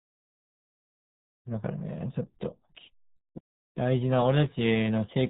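From start to end, the speech carries heavy RealAudio 14.4 codec damage. Nothing passes above 3.8 kHz. The voice sounds muffled and gargly, which fits an 8 kbit/s dial-up stream.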